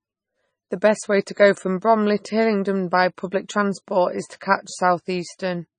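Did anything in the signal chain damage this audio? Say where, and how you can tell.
Yes, at the codec stage, throughout the clip. The speech sounds watery and swirly, with chirpy, metallic sibilants and smeared consonant onsets, and nothing survives above 9.4 kHz. This is likely MP3 compression starved of bits, which fits a bitrate in the low twenties of kbps. On a spectrogram the treble stops at a hard horizontal ceiling near 9.4 kHz, and the weaker bands below it break into flickering blocks that switch on and off from frame to frame.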